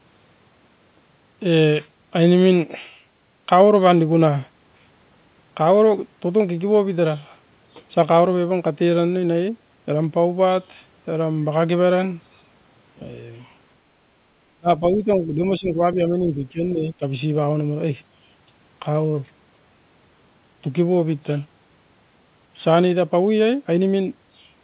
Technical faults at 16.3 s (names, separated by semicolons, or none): speech suppressed in double talk